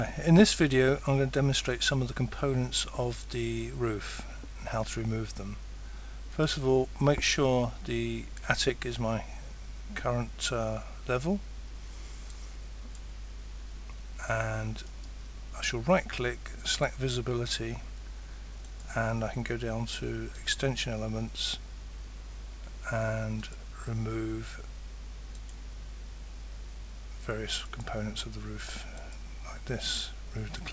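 No audible faults anywhere in this recording.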